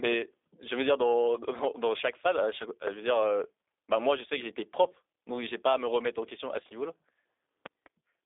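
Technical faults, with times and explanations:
Throughout, G.729 codec: the speech has the plainly audible roughness of G.729A at 8 kbit/s. Each 10 ms frame gets rebuilt from a vocal tract filter, a pitch predictor and a handful of pulses rather than the real waveform, so voices come out a bit buzzy and synthetic. The band is squeezed to roughly 300 Hz to 3.6 kHz, and nothing above 3.7 kHz survives, which gives it that flat phone-line sound.
7.66 to 7.89 s, loud pop: two sharp pops land close together, peaking well above the speech, about 15 dB over it, while the talking carries on underneath. That's the signature of a sudden voltage step or pulse getting into the chain, likely from a plug, switch, static discharge or driver glitch, with the following circuitry shaping each hit into a short thump. The pair suggests a make-and-break or a brief ring.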